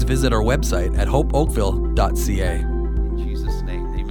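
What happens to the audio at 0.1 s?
Nothing goes wrong at 0.1 s; the audio plays through that moment intact, with no dropout, click or distortion.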